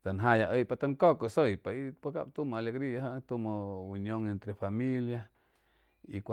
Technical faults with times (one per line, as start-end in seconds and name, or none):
none